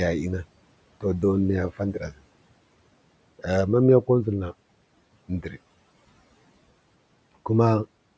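The noise suppressor misjudged part of this speech recording as background noise between 1.77 and 2.23 s and pulled it down along with the room noise, by about 14 dB at its deepest. Around a tenth of a second of speech in that stretch sounds swallowed and faint, with soft sounds thinned out. The room noise sits about 24 dB under the speech, and the call microphone processing leaves nothing above 8 kHz.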